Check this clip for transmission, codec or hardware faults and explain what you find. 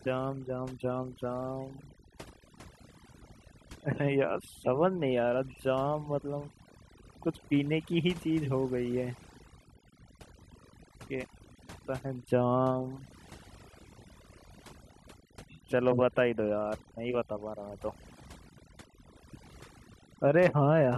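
The clip shows one fault, overdone noise removal, present for the whole duration. A noise reduction stage was driven too hard: any frequency band sitting close to its noise estimate was pulled down to almost nothing, and the quieter parts of the speech went with it. Between phrases the background sinks to near silence scattered with twinkling specks. On a spectrogram the floor looks blank, dotted with isolated flecks, and the speech harmonics appear ragged and patchy.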